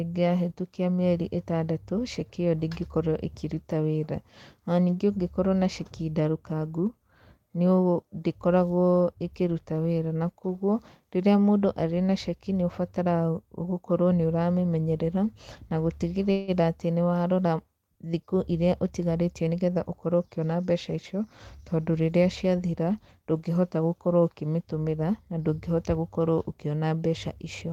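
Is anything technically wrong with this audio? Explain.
Yes, there are two faults.

From 16.31 to 16.51 s there is a call audio freeze. Packets were likely held up in transit, so the jitter buffer ran dry and the receiver stretched the last sound for 164 ms. That is heard as a brief fading buzz, after which the audio resumes where it stopped with nothing lost.

From 18.34 to 20.45 s comes a jitter buffer speed-up. With excess audio queued after that delay, the receiver trimmed tiny pitch-period slices again and again, about 150 ms in total, so the speech plays at 107% speed at unchanged pitch and sounds slightly hurried.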